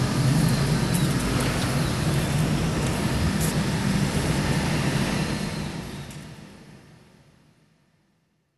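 From the start to the end of the clip, the sound is dull and carries a gurgling, granular roughness, with nothing above about 12.2 kHz. This is plainly audible MP2 compression, likely at a low rate around 80 kbps, where too few bits forced the upper sub-bands off and left the remaining bands coarsely quantised and flickering. The smooth fade-out, beginning around 5 s and finishing at 8.58 s, carries this same texture down with it.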